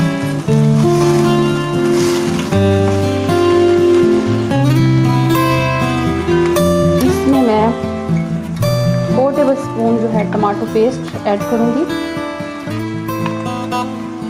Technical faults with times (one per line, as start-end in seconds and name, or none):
0.00-14.30 gain pumping